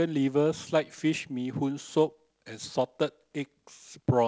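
No technical faults detected.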